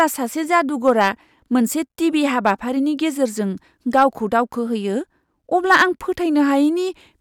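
Hard clipping hits the speech at 0.53–1.09 s, 2.46–2.51 s, 3.95–4.39 s and 5.71–5.83 s, overdriven by about 4, 3, 3 and 6 dB. Peaks exceed what a stage can pass and are sheared flat, adding high harmonics heard as crackly distortion, harshest last.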